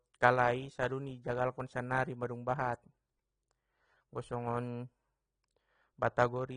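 Throughout, the speech sounds dull, with nothing above 9.8 kHz. Sibilants are smeared and fizzy. Likely AAC compression, fitting a bitrate near 36 kbps.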